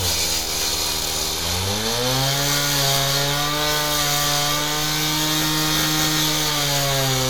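A recording of everyday sounds, with no technical faults to be heard anywhere in the signal.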